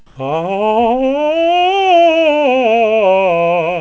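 A short music recording carried over a call link whose band stops at 8 kHz, consistent with a G.722 codec, has comfort noise in place of the background from 0.06 to 0.15 s. For those 90 ms, the quiet bed, about 34 dB below the loud passages, becomes steady, featureless hiss that shifts in level by about 5 dB. This is likely from discontinuous transmission, with the receiver synthesising noise while the sender paused. Unlike a gate or dropout, the gap is filled with noise rather than left silent.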